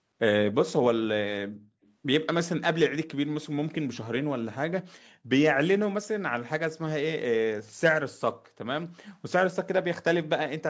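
From 0.65 to 0.82 s the speech drops sharply, by roughly 40 dB, for about 150 ms. This is most likely speech suppressed in double talk: with both sides talking, the echo canceller turned the near talker down along with the echo. The same dip recurs from 9.66 to 9.85 s, for about 200 ms. Between them, from 1.83 to 1.92 s, a very faint delayed copy of the speech trails it by 271 ms, well below the main signal. This is likely an echo leak, where the far end's loudspeaker sound slipped past its canceller. The fixed delay and faint copy set it apart from room reverberation, which blends in immediately.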